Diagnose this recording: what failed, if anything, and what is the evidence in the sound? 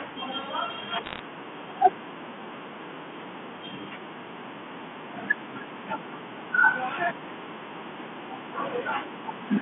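Bit errors on the digital phone line flipped scattered bits in the G.711 samples, putting sharp ticks and crackle over the speech from 1.04 to 1.19 s.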